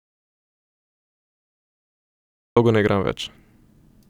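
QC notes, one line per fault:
0.00 to 2.57 s, audio dropout to silence: the clip opens in the middle of the dropout, with silence and no room tone. Speech comes back abruptly at "ne igram". The input was likely lost while writing continued, so whatever came before is missing.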